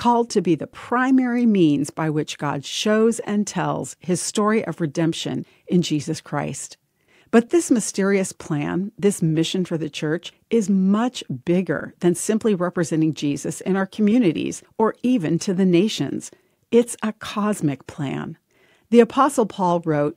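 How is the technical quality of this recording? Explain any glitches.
No glitches or technical faults are audible anywhere in the recording.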